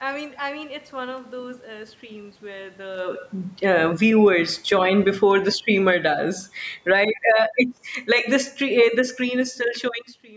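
Automatic gain falling from 3.72 to 6.07 s, and again from 6.75 to 7.28 s: the speech starts loud, and the automatic gain control, judging the level too high, pulls its gain down by about 6 dB and then about 9 dB. The voice and the room noise sink together. Shortly before the first dip, around 3 s, the talker shifts relative to the microphone.

Automatic gain rising from 7.37 to 8.49 s: the controller now finds the level too quiet and lifts it by about 5 dB, so voice and background swell together. From 7.96 s it reverses while still rising, falling again by about 4 dB until 9.66 s.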